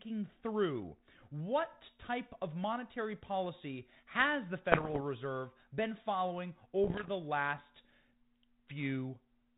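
At 4.72 to 5.01 s, after "monetary policy has the", bit errors on the ADPCM link cause pops and rough bursts. At 6.84 to 7.09 s, after "been following", it happens again. Flipped bits throw off the decoder's step size and predictor, so each error rings on with brief level jumps.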